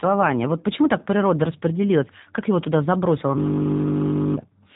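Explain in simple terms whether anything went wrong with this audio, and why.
The whole speech clip has gone through the G.729 codec, which rebuilds voices from a rough model, so it sounds slightly synthetic and muffled, with nothing above 3.8 kHz.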